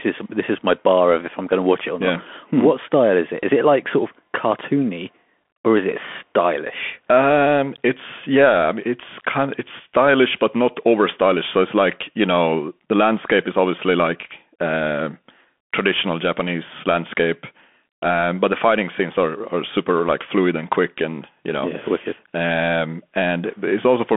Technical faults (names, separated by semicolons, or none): Bluetooth CVSD headset codec